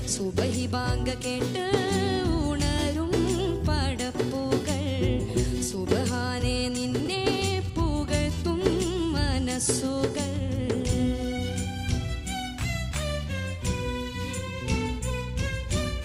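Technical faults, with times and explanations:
7.0 to 7.08 s, chunks out of order: a brief jumbled stutter where a 20 ms piece of audio arrived late and played about three chunks after its proper place, leaving three hard joins. Unlike a dropout, nothing goes silent or missing. The same material is only shuffled.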